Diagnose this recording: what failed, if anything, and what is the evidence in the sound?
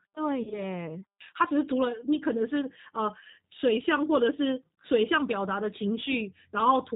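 Codec stage: a G.729 codec rebuilds the speech from a filter and pulses, cutting everything above 4 kHz. The speech sounds plainly rough and synthetic throughout.

Network stage: VoIP packet loss concealed by the speech codec, 0.43 to 0.68 s. About 60 ms went missing, in gaps up to 40 ms, bridged by decoder guesswork that fades.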